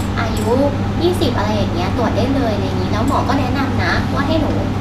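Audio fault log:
Nothing to log here, as this speech clip has no faults to note.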